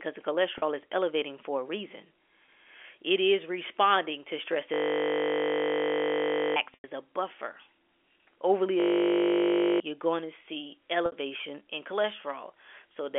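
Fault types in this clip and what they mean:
Packet loss with pitch repetition: packets were dropped and the receiver repeated the last pitch period, so gaps of 20 to 100 ms become brief, held, buzzy stretches in the speech, the longer ones fading into silence.
System hang loop: the system froze while the sound hardware kept replaying a 20 ms buffer, so a steady 50 Hz buzz replaces the speech for about two seconds, then one.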